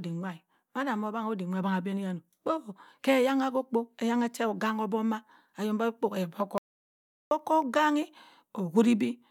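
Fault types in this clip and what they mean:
Audio dropout to silence: the speech cuts off abruptly at 6.58 s and returns just as suddenly at 7.31 s, leaving a gap of about 0.73 s that is silent, with no room tone or background hiss underneath. Whatever was spoken in that window is simply missing. The likely cause is a momentary loss of the input signal, from a loose connection, a dropped link or a brief mute, while the recorder kept writing silence.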